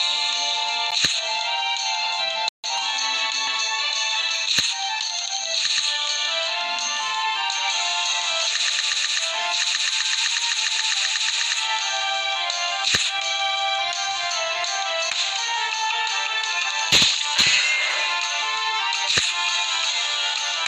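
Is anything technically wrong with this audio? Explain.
Yes. At 0.91 s there is a sharp tick: the sound drops for about 10.7 ms and returns with no fade. This is a block of digital silence, a run of zeros likely written when the output buffer wasn't filled in time, a gap that fits a 512-sample buffer.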